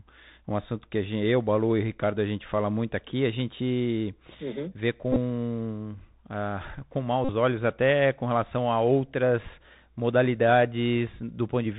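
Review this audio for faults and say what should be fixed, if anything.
The headset link is running the Bluetooth CVSD headset codec, where a one-bit, 64 kHz up/down stream with an adapting step size carries the speech. Everything above 4 kHz is gone, giving a narrow, telephone-like band. The step cannot keep up with loud high content, so s sounds come out scratchy and a granular hiss sits under the speech throughout. To prevent this, use a wideband headset codec (mSBC or LC3) or a wired or USB microphone.

Bluetooth headset packet repeated: radio packets were lost and the chip re-decoded the last good packet in their place. The first event runs from 5.12 to 5.17 s, just after "gente uhum vê". About 30 ms of audio is lost, spread over 37.5 ms in short runs, which points to around eight lost 3.75 ms packets. The second runs from 7.25 to 7.31 s, between "uh com" and "olhos até com relação". 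About 41 ms is lost, fitting roughly eleven packets. The runs of repeats produce a brief buzz near 267 Hz that replaces the speech. To prevent this, improve the radio link by keeping the phone close, reducing 2.4 GHz interference and avoiding body blocking.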